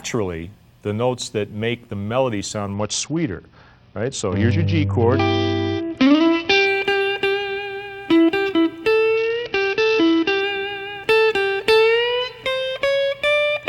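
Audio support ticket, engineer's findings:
Bluetooth SBC bit pool drop, 2.74–6.67 s and 9.17–10.41 s: treble dulls, gritty noise rises, then recovers. Link congestion starved the codec, fitting a pool cut from about 31 to 8. Spectrogram: upper bands blank out abruptly; waveform envelope largely unchanged.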